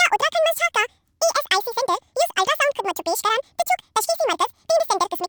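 From start to end, the speech plays at double speed and an octave higher. The audio was read two samples at a time.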